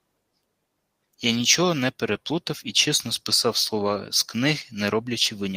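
Around 2.05 to 2.15 s, and again briefly at 3.87 s, there's a lost packet rebuilt from error correction: the decoder played the low-bitrate copy carried in the following packet, so nothing drops out, but those stretches turn grainy and noisy.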